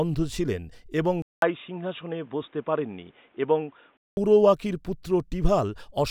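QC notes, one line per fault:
1.22–4.17 s, input switched to a poorer device: after a 200 ms dropout the speech turns dull and boxy, with nothing above 3.8 kHz and faint new background noise roughly 40 dB down, then opens back up at 4.17 s. The cause is likely a change to a narrower-band microphone or headset profile. The gap at the switch and the change in background noise, with loudness roughly unchanged, set it apart from a simple low-pass filter or a codec bandwidth drop.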